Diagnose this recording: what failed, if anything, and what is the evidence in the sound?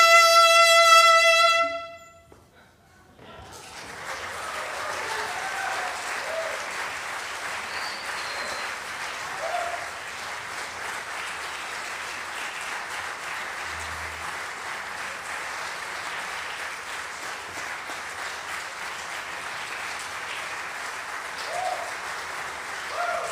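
Nothing in the recording points to a failure at any stage of the chain. The sound gives no evidence of trouble in the wiring, conversion, buffering, transmission, storage or playback path.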